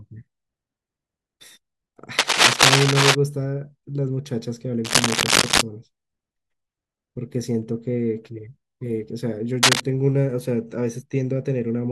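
Cable scratch noise breaks into this speech clip at 2.18 to 3.15 s, 4.85 to 5.62 s and 9.63 to 9.82 s: dense, ragged rustling a little louder than the speech, likely from a worn cable or connector being moved so its contact resistance fluctuates rapidly.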